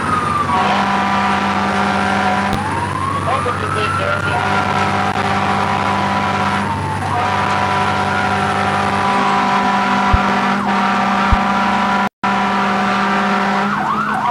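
A loud pop jumps well above the sound at 2.53 to 2.56 s, then two pops at 10.14 to 10.32 s. The likely cause is a voltage pulse from a plug, switch, static or driver glitch.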